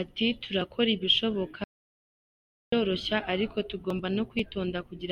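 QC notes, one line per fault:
1.64–2.72 s, audio dropout to silence: the speech cuts to dead silence for about 1.08 s, with no room tone, likely from the input being lost mid-recording.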